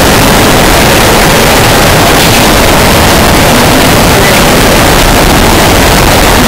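From start to finish the 8-bit samples were most likely decoded with the wrong signedness, signed and unsigned mixed up, so the top bit of every sample is inverted. Each time the waveform passes through zero it lands at the opposite extreme instead, turning small swings into full-range jumps. The result is loud, harsh distortion across the whole clip, with quiet stretches blasting at the same level as everything else.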